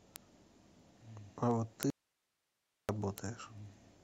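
From 0.16 s to 3.98 s, word clock ticks recur about every 0.07 s, some fifty sharp ticks of uneven strength. An unlocked receiving clock, running a few hundred parts per million off the sender's, drops or repeats one sample each time the two clocks slip past each other. Their steady spacing separates them from random clicks.

At 1.90 s the speech cuts off abruptly and returns at 2.89 s, a gap of about 0.99 s. This is an audio dropout to a faint residue: only hiss remains, about 50 dB below the signal, likely because the signal was lost while the downstream path stayed live. Its hard edges distinguish it from a natural pause or a fade.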